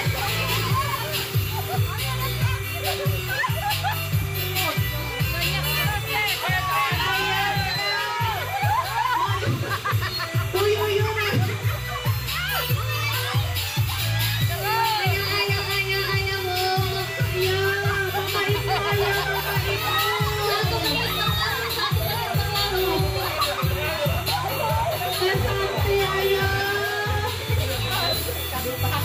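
A steady chirping warble sits behind the sound for the whole clip, roughly 15 dB below it, flipping between pitches around 1 and 2 kHz. This is timecode bleed: linear timecode, whose rhythm fits 30-frame code, leaking in from a neighbouring track or cable.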